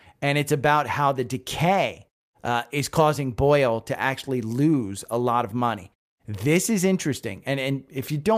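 Nothing here sounds broken, and the quiet gaps between phrases that drop to silence and come back in time for the next sound are just the system going quiet between phrases.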